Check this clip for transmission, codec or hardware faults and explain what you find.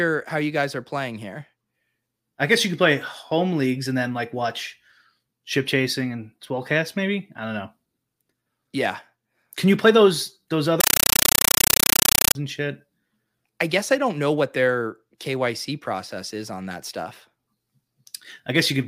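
One fault: a compressed stream played as audio, from 10.80 to 12.35 s. The undecoded data is treated as samples, so each 8 ms burst of loud noise is followed by silent padding, repeating 31.25 times a second, which fits a Dolby Digital stream. Unlike random digital noise, the loud static chatters at a steady rate.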